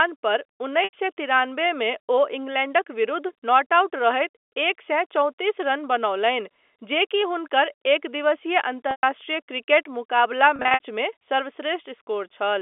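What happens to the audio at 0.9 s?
Packet loss with pitch repetition, 0.84 to 0.93 s: the receiver repeats the last pitch period across the 90 ms gap, a brief buzzy hold before "सए तिरानबे".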